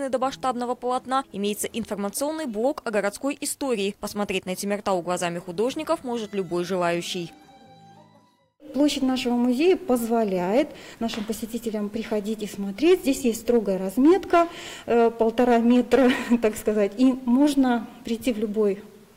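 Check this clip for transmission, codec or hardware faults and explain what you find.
No transmission, codec or hardware faults are audible anywhere in the clip.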